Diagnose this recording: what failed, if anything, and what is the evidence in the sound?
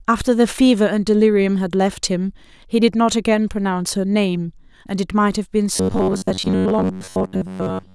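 Robotic sound from repeated short buffers, 5.76 s onward: a 93.8 Hz buzz, likely buffer-stage underruns repeating 10.7 ms chunks; spectrogram shows evenly spaced harmonics.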